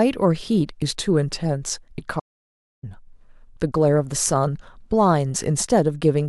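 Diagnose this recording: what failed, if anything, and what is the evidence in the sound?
The failure is an audio dropout to silence: the speech cuts off abruptly at 2.20 s and resumes mid-flow at 2.83 s, so about 0.63 s is lost. The gap holds no room tone or noise floor at all. On the waveform it is a flat line, and on a spectrogram a dark vertical band with hard edges. The stage is likely the input link or capture device, with the recorder writing silence while its signal was absent.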